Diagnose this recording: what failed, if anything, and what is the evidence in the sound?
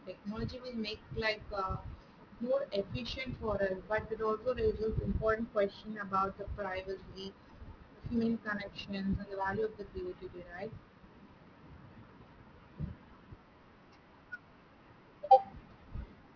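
Aliasing throughout, at the sample-rate conversion stage: this speech was downsampled to 11 kHz without an anti-alias filter, so content above the 5.5 kHz fold returns as gritty, metallic sibilance only modestly below the signal.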